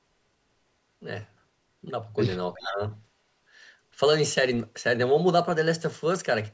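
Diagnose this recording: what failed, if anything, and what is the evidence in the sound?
Call processing: from 2.54 to 2.8 s the speech dips by around 15 dB in pieces, likely speech suppressed in double talk, gating rather than a steady codec dropout.

Call processing: at 2.64–2.73 s a faint copy arrives 369 ms late, about 20 dB down, likely echo leak past the far-end canceller; delay separates it from room reverberation.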